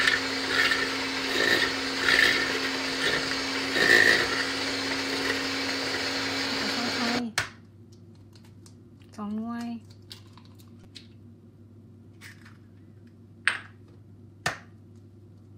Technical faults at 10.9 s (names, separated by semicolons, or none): repeated buffer